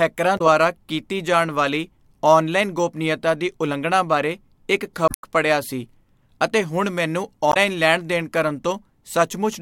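At 0.35 to 0.41 s, 5.05 to 5.24 s and 7.50 to 7.57 s the speech breaks up briefly from damaged data in a compressed stream. Corrupted bytes make the decoder misread frames, lose sync and hunt for the next valid header, producing a garbled chirp or blip. On a spectrogram each shows as a brief disruption cutting across the harmonic pattern. On the waveform the signal jumps abruptly, with the longest disruption near 5.1 s.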